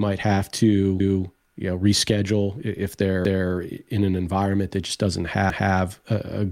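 At 1.00 s, 3.25 s and 5.50 s the speech stutters: overlapping chunks, where each 2-second block restarts 250 ms early, so that quarter-second replays at every join. Unlike a dropout, nothing goes missing. Material repeats at a steady interval.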